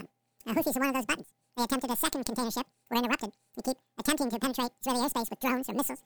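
From start to finish the clip shows a wrong sample rate fault. Everything runs at twice its proper speed and sits a full octave, 12 semitones, too high, which fits material recorded at 24 kHz being played at 48 kHz without conversion, leaving the sound rushed and high.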